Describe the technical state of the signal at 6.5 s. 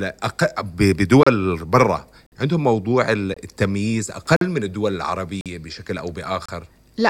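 At 6.46 to 6.49 s the speech breaks for about 29 ms: a gap between stream segments. Two segments' timestamps fail to meet, so the player inserts hard-edged silence, here at a boundary that fits 1-second segments. Unlike a dropout, no audio is lost; the sound resumes exactly where it stopped.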